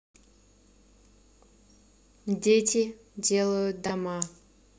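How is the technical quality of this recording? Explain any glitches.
One glitch stands out. Chunks out of order at 3.86 to 3.90 s: a 16 ms chunk plays two chunks late, causing a brief jumbled moment, with three abrupt waveform discontinuities and vertical spectrogram lines.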